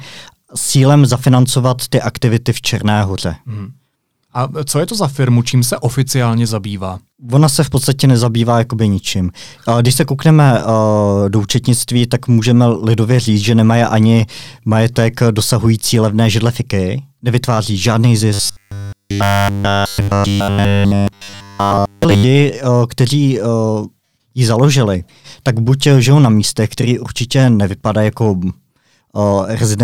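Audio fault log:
18.34–22.24 s, robotic sound from repeated short buffers: for about 3.9 s the speech turns into a rigid, metallic buzz at 100 Hz that only loosely tracks the words, and the whole stretch appears to be repeated material. The likely cause is audio arriving too slowly, so a 10 ms slice is replayed over and over while real audio is skipped. The waveform shows an identical 10 ms cycle, and the spectrogram shows evenly spaced harmonic lines at 100 Hz multiples.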